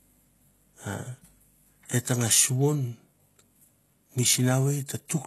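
From start to finish the speech carries plainly audible HE-AAC compression damage. The upper range sounds bright but synthetic: s sounds come out gritty and metallic, and the treble fails to track the lower harmonics. This is likely spectral band replication patching copied low bands upward, which fits a very low bitrate of around 16 kbps. On a spectrogram the top band looks smeared and blocky, with repeated texture above the crossover and nothing at all above 12.3 kHz.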